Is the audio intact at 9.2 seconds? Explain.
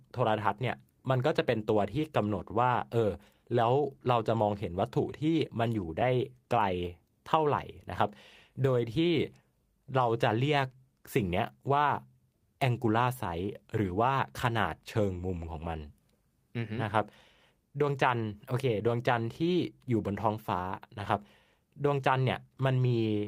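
Yes, the audio is intact at 9.2 seconds, with no fault audible at that point in the speech.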